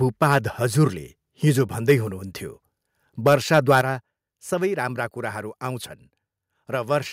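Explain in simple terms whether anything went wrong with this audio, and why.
Three bursts of harsh, crackly distortion land on the loudest moments of speech, at 0.22 to 0.36 s just before "हजुरले हिजो", at 1.89 to 1.92 s right after "हजुरले हिजो", and at 3.26 to 3.81 s. This is microphone overload. The likely cause is the input being set too high, so the tops of the loudest sounds get sliced off.

At 3.81 s, right as the last burst ends, the microphone volume stepped down. Everything, voice and background alike, suddenly gets quieter in one jump. The software likely lowered the input after the distortion. This sounds clean rather than crackly, which separates it from the overload.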